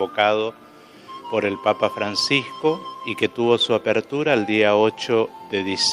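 Nothing in the recording stood out as a technical problem on listening.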